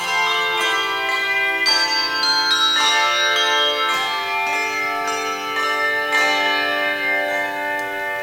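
No technical faults can be heard anywhere in the clip. Nothing breaks up, drops out or distorts at any point.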